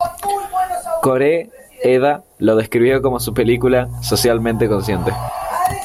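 Mains hum runs from 2.90 to 5.29 s: a steady 60 Hz tone with low harmonics sits fairly loud beneath the speech. Power-line current is leaking into the signal path, most plausibly through a ground loop or a transformer close to the cabling.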